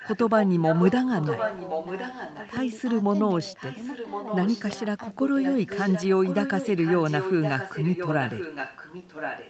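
A delayed second copy of the speech trails the live talker by about 1.07 s from 0.00 to 0.92 s, sitting only about 5 dB below it, so a delayed copy of the voice comes back alongside the live speech. This is an echo leak. The far end is likely playing the call over a loudspeaker, and its echo canceller let part of what its microphone picked up travel back down the line.

Inside that stretch, from 0.51 to 0.55 s, the live speech briefly ducks by about 10 dB for roughly 40 ms, a short clipped gap rather than a full dropout. This is speech suppressed in double talk. With both sides sounding at once, the echo canceller likely could not separate the genuine talker from the returning echo, so it turned down both together for that moment.

The echo leak returns from 1.18 to 2.51 s, again about 5 dB under the speech. It comes back once more from 3.55 to 4.80 s and from 5.42 s to the end at 9.49 s, now quieter at about 10 dB down. 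The delay holds steady at about 1.07 s each time, so the repeat lags the original by the same amount and reads as a distinct ghost rather than reverberation. Throughout, the audio reaches only up to 8 kHz, which matches the Opus call path it travelled over.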